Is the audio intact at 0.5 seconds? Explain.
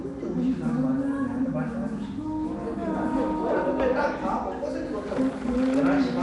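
No. At 0.5 s, as throughout, the sound was likely squeezed through Nellymoser compression, whose fixed two bits per sample starve weak bands and refill them with noise. The result is a rough, hissy haze with a smeared, underwater quality, and nothing above 10.6 kHz.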